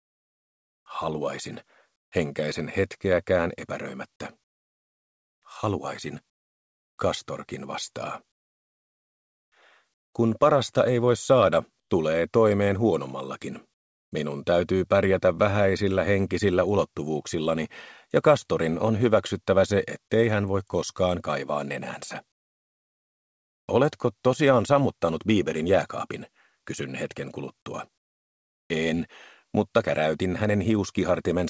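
From 1.96 to 2.12 s, and again from 11.80 to 11.90 s, there is comfort noise in place of the background. The faint real background drops out. A flat, featureless hiss fills the gap, about 17 dB and then about 10 dB quieter. The likely cause is discontinuous transmission, with the receiver synthesising noise.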